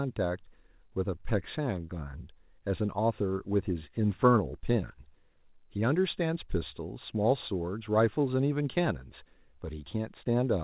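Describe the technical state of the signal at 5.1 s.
At 5.1 s the speech is intact, with only the ordinary band limit of the call path, which carries nothing above 4 kHz.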